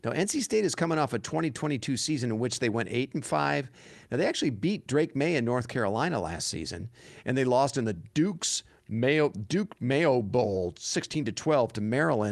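No technical faults can be heard anywhere in the recording. The speech has come through a WebRTC call path, and its top end stops at about 12 kHz, which fits an Opus codec running at around 32 kbps.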